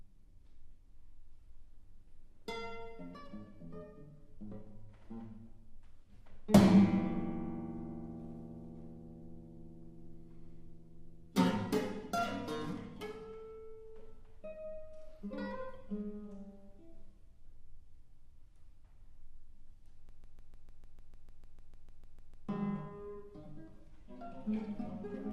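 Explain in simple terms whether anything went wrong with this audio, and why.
At 20.09 seconds the sound sticks in a broken-record loop. A 150-millisecond piece repeats 16 times, back to back, until 22.49 seconds. A stalled player or stream likely kept resending its last fragment. The sound meant for that stretch is lost.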